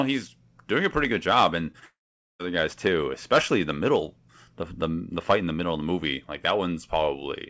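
A speech recording over a call link, band-limited at 8 kHz in a way consistent with a wideband codec such as G.722, shows short concealed packet loss at 1.72–1.76 s and 1.80–1.83 s. Each gap is roughly 20 ms of missing audio that the decoder patched by extending the preceding sound, heard as a brief smear or wobble before real signal resumes. From 1.85 to 2.41 s comes what is likely a long network dropout: the concealment continues the last sound as a fading buzz or hiss, then about 0.44 s of silence follows, and the speech returns without the lost section.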